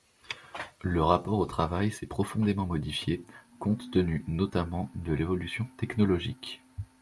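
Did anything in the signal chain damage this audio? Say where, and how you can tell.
No, nothing in the signal chain damaged this audio.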